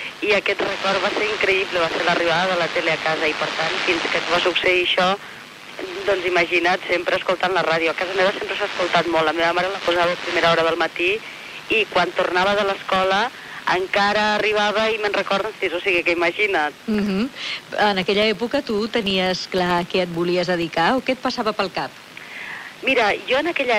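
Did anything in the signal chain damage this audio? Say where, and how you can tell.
Yes. A steady tick or buzz at 25 Hz runs through the whole clip, rising and falling with the sound's level. This is a filter restarted on every block in a buffer-based processing stage: each 40 ms block starts from cleared state and produces a small transient.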